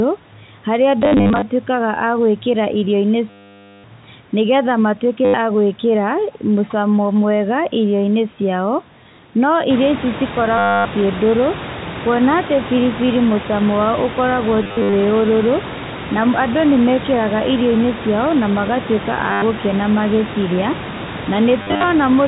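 Packet loss with last packet repeated occurs seven times: 1.02–1.42 s (scattered, longest run 50 ms), 3.30–3.84 s (540 ms, the longest), 5.25–5.34 s, 10.58–10.85 s, 14.63–14.93 s, 19.32–19.42 s just after "na magatuĩka", and 21.62–21.84 s. Missing audio is filled by replaying the last received packet. The lengths lost point to 10 ms packets, so longer runs carry a robotic buzz near 100 Hz.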